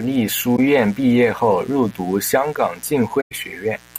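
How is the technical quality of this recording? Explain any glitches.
The recording has two technical problems: a constant mains buzz and two short dropouts in the speech.

Mains buzz runs through the whole clip, roughly 25 dB below the speech. Sharp switching spikes locked to the 60 Hz supply put a dense series of harmonics up into the kilohertz range, so the hum sounds raspy rather than smooth.

AAC frame loss with muting occurs at 0.56–0.59 s and 3.20–3.32 s. The decoder zeroed the missing spectrum, and the overlapping windows fade the sound out and back in. The first is a brief dip and the second a soft-edged hole. The first gap fits one lost frame and the longer second gap fits about five.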